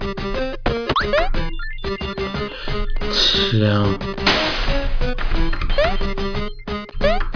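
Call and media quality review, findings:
No faults found on review. Nothing to raise against any component in the chain.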